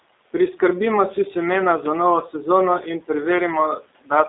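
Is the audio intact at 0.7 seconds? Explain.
No. At 0.7 seconds the speech is under G.729 codec damage, which runs through the whole clip. The codec squeezes speech into 8 kbit/s. It does not keep the waveform. It rebuilds each short frame from a vocal tract filter, a pitch predictor and a few pulses. The line here passes only about 300 Hz to 3.7 kHz. So the speech sounds thin, slightly rough and synthetic. The room noise, about 21 dB below the speech, warbles along with it.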